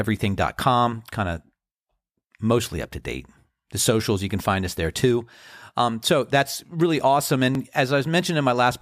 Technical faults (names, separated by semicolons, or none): overlapping chunks